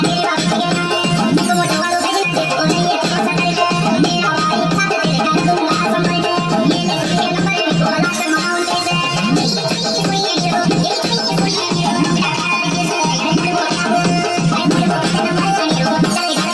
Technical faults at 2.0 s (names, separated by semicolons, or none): wrong sample rate